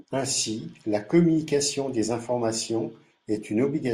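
No technical faults can be heard anywhere in the recording. There is nothing to place on a timeline, and no moment calls for explanation.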